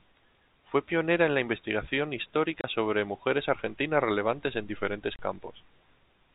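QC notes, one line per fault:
2.61 s and 5.16 s, packet loss filled with silence: two short dropouts, each about 30 ms, fitting one lost 30 ms packet each time. The first lands right after "pionera en la investigación" and the second right after "argentinas relevantes en diferentes". The receiver just played silence in the gap, so the speech cuts off hard and snaps back. The G.711 telephone coding band limit under 4 kHz applies throughout.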